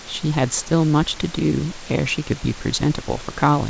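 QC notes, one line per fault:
Nothing to flag on this one, just a bit of room noise sitting about 17 dB under the speech and the call line's usual top end rolling off at 8 kHz.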